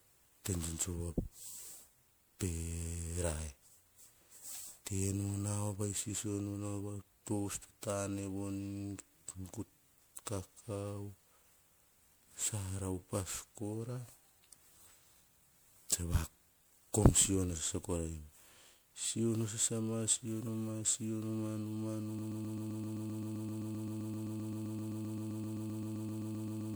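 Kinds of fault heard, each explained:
generation loss: likely repeated MP3 re-encoding, roughly seven passes at 128 kbit/s, leaving swirly, hollow, smeared sound with blurred attacks and nothing above 20.9 kHz.
broken-record loop: from 22.19 s to the end, a 130 ms fragment repeats back to back about 35 times, likely a stalled stream resending its last piece.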